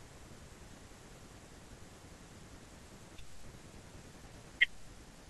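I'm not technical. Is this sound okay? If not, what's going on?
Yes, nothing in this recording stood out as a problem when I listened to it.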